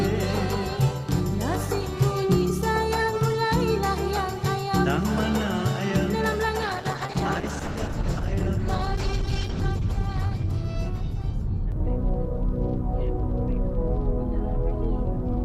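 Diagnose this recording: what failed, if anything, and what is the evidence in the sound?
A call bitrate drop at the codec stage, driven by the network's bandwidth estimate, runs from 6.62 to 12.71 s. The audio turns coarse and watery and loses its top end, which fits a fall from about 48 to 11 kbps, worst for roughly 3 s. Unlike packet loss, it has no gaps or stutters, just continuous degradation until quality recovers.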